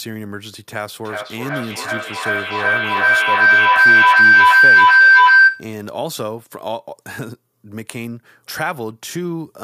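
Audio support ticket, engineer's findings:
Feedback howl, 1.04–5.79 s: mic-to-speaker loop gaining each pass, narrowing to tone near 1.5 kHz, pulsing roughly every 400 ms, peaking about 16 dB above speech.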